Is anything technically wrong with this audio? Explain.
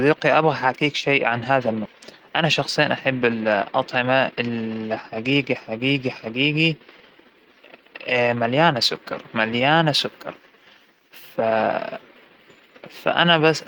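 Yes, there are two faults in this speech clip, close together near the start.

At 1.85 to 1.87 s there is a skip ahead. Roughly 400 ms of speech is simply gone. It was discarded while later audio was already queued, so playback leaps forward and the two sides are spliced almost directly, with nothing filled in. The result is an abrupt jump in the speech rather than a hole. What separates it from a dropout is that there is no silence or muted gap, just missing material and a sudden join.

From 1.94 to 4.57 s there is a jitter buffer speed-up. The receiver was holding more audio than its target, so it trimmed many short pitch-period-sized pieces in succession, removing around 200 ms in total. The speech runs at about 108% speed and sounds slightly rushed for that stretch. Unlike a sample-rate or playback-speed error, the pitch stays the same, and the effect ends once the excess delay has been worked off.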